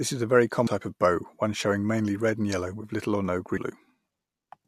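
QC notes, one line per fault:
0.66 s and 3.56–3.58 s, damaged data in a compressed stream: brief glitches, the first between "is a very" and "of bow one showing", the second right after "with little or no". Corrupted frames make the decoder misread and resync, giving a brief glitch where the damaged data was.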